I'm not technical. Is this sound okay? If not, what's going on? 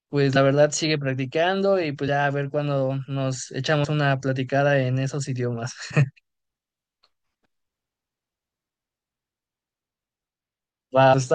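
No. Compressed frames are skipped at 0.35, 2.07, 3.83, 5.9 and 11.12 s. Short chunks of the speech go missing, roughly a twentieth to a seventh of a second each, so the audio jumps ahead.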